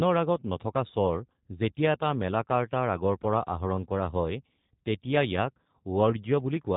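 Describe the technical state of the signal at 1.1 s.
G.729 codec coding is present at 1.1 s and runs through the whole clip. The speech is rebuilt from a vocal tract filter, a pitch predictor and a few pulses placed in each 5 ms half of a 10 ms frame. This removes everything above 4 kHz and leaves the speech plainly rough and synthetic, with a dull, buzzy texture. The sound fits the G.729A variant running at 8 kbit/s.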